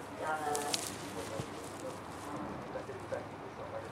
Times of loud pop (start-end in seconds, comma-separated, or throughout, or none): none